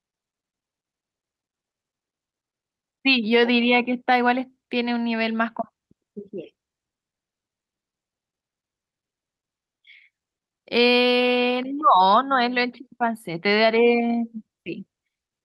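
No technical faults occur at any point in the recording, so there is nothing to describe in time order.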